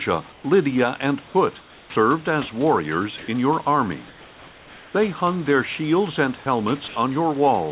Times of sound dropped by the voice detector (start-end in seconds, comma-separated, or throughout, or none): 6.44